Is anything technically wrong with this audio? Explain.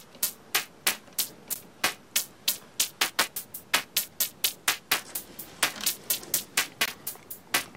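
Yes. At 1.54 s and 6.86 s there is a block of digital silence: most likely the output buffer wasn't filled in time, so samples became zeros. The sound drops out abruptly for 12 ms and then 20 ms, the first heard as a tick and the second as a short hole.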